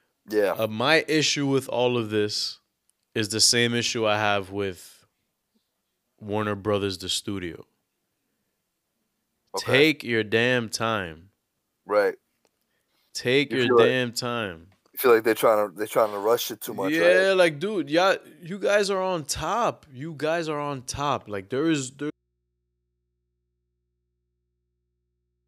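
Speech that suffers an audio dropout to a faint residue at 22.11 s, right after "there is", lasting to the end. Only mains hum remains, roughly 55 dB down, most likely from a live but disconnected input. The waveform collapses abruptly to a flat trace, and the spectrogram shows only thin low hum lines.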